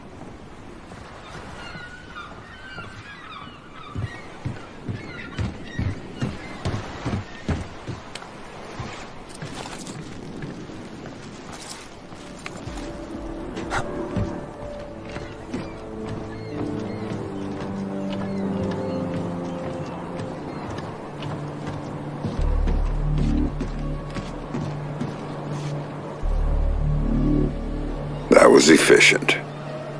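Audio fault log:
Nothing stood out on a careful listen.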